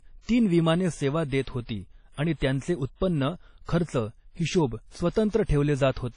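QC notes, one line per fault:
Throughout: WMA compression, likely from a low-bitrate transform encoder, around 32 kbps by the sound of it. Long coding blocks smear quantisation noise around the speech, giving a ringing, washy quality with hiss that swells and fades with it, and nothing survives above 10.1 kHz.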